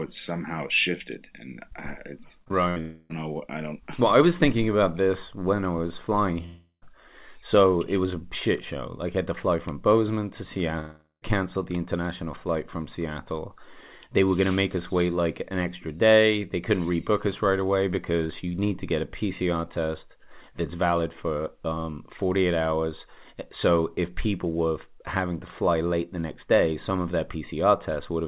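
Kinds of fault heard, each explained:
Short concealed packet loss: two back-to-back 20 ms holes at 2.44 and 2.48 s were patched by extending the preceding sound, giving a brief smear before the real audio resumes; the decoder bridged each gap rather than leaving silence.
Burst of packet loss: from 2.70 to 2.78 s about 60 ms went missing in one run, and the receiver stretched the last sound across it as a decaying fill, so the audio picks up slightly further along with that fragment gone.
Long network dropout: three stretches at 2.80, 6.46 and 10.80 s, lasting roughly 0.3, 0.36 and 0.42 s, were likely lost in transit; each starts as a fading continuation, the latter two ending in about 0.1 s of silence, before "know i don't", "so it was a" and "the international flight from".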